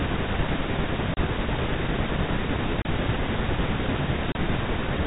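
At 1.14, 2.82 and 4.32 seconds the speech drops out for about 30 ms each time. That's packet loss filled with silence: a packet never arrived, and the receiver just played nothing in its place. Each gap's length fits a single lost 30 ms packet. The holes have hard edges, and the speech sounds briefly chopped. Underneath, the G.711 telephone band comes through cleanly.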